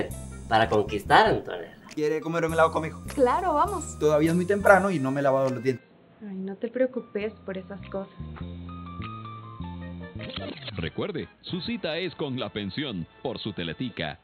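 At 5.78 s the sound abruptly turns dull and boxy and stays that way to the end. Nothing reaches above 4.2 kHz, the level drops by roughly 10 dB, and a new background noise appears about 30 dB under the signal, with no gap at the change. Because band, level and noise floor all shift together at one instant, this is likely an input switched to a poorer device, not a filter or codec narrowing, which would leave level and noise unchanged.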